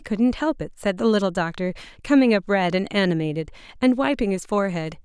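Nothing stands out as a technical fault anywhere in this recording, so there's no glitch, dropout or odd moment to point to along the way.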